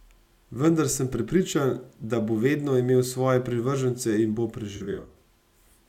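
Just after "svoje privržence in bo", from 4.76 to 5.16 s, AAC frame loss with concealment scatters about 0.21 s of gaps, each a few tens of milliseconds. The decoder refills them from the last good spectrum, leaving smeared, phasey speech. A spectrogram shows blurred, noisy patches with washed-out harmonics.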